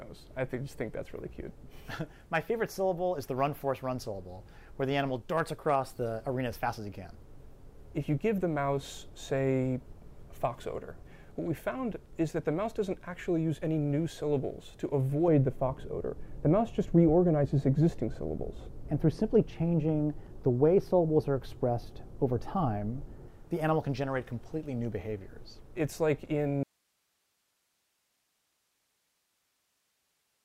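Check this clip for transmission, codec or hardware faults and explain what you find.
Two faults are audible: a stretch of wrongly applied de-emphasis in the middle of the clip, and a dropout near the end that never recovers.

From 15.28 s to 23.28 s, de-emphasis is applied wrongly. A treble-cut filter, meant to reverse a pre-emphasis boost, has acted on audio that carried no such boost, or has acted a second time. The response falls smoothly with frequency, to about 11 dB down at 10 kHz relative to 1 kHz. Across those eight seconds the sound turns dull and muffled, with its upper detail rolled away.

At 26.63 s there is an audio dropout to a faint residue, lasting to the end of the clip. The wanted signal cuts out abruptly, with none of the gradual decay of a fade. What remains is hiss, sitting roughly 45 dB below the earlier signal level. That residue shows the path downstream of the break is still live, which points to a likely loss of the source feed or an upstream connection rather than a shutdown of the whole chain.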